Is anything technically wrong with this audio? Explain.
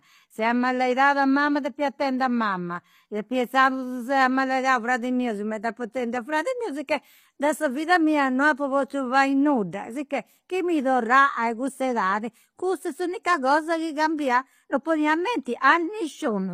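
Yes. Throughout the speech, the treble sounds synthetic: s sounds turn gritty and lispy. This is likely HE-AAC compression, with high frequencies rebuilt from copied lower bands, consistent with HE-AAC v2 near 24 kbps.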